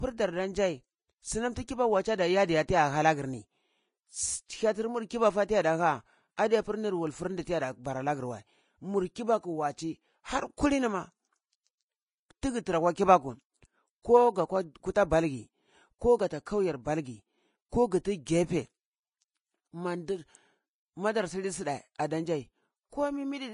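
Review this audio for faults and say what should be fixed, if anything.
Throughout the speech, the treble sounds hissy and grainy, sibilants turn rough and noise-like, and nothing is heard above about 10.5 kHz. The damage is plainly audible and is likely Vorbis compression at a low setting, around 28 kb/s. At that rate the encoder removes the top band entirely and quantises the remaining high frequencies so coarsely that fine detail is replaced by noise of similar energy. To fix this, re-encode from the original source at a higher Vorbis quality or use a lossless format.

At 21.98 s, a brief hiss of about 12 ms comes just before a sharp onset, which softens and smears the attack. This is pre-echo. The transform codec spreads its quantisation noise across the whole block, so noise sized for the loud attack also fills the quiet gap before it. To prevent it, encode at a higher bitrate with an encoder that switches to short blocks on transients.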